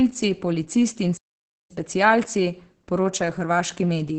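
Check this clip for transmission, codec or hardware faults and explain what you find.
Two problems stand out: heavy Opus voice compression across the whole clip, and a playback stall near the start.

The Opus voice compression runs throughout. The codec's speech mode models the signal with linear prediction and codes the excitation coarsely, so the speech comes out muffled, hoarse and a little robotic. Nothing reaches above about 8.9 kHz, and the damage fits a low bitrate around 10 kbps.

The playback stall runs from 1.17 s to 1.71 s. The speech cuts out mid-flow into silence for roughly half a second, then carries on. The likely cause is the player running dry of data or its thread getting blocked until it caught up.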